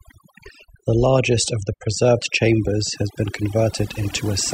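Overdone noise removal runs through the whole speech clip. The noise reducer was pushed too hard, so bands sitting near its noise estimate get pulled right down, taking quiet bits of the voice with them. You hear near-silent gaps with twinkly specks.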